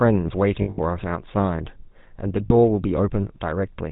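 The speech runs through the GSM full-rate codec from start to finish. Its band stops at 4 kHz, and its buzzy, gravelly roughness fits the 13 kbps full-rate coder. The coder rebuilds the voice from a vocal-tract filter driven by a thinned, regularly spaced pulse excitation. That pulse train is what separates it from plain band-limiting, which would only dull the sound without adding the grain. It also differs from low-bitrate music codecs, whose damage is warbling or smearing rather than grit.

Between 0.62 and 0.79 s, lost GSM frames break the sound. About 140 ms go missing across a 160 ms stretch, which points to several 20 ms frames, and the longest gap runs roughly 70 ms. A second, shorter loss of 40 ms falls at 2.46 to 2.51 s. At each loss the decoder keeps repeating the last good frame. That gives a held, metallic ring instead of the click or silence of a dropout, and instead of the exact stutter of a repeated buffer.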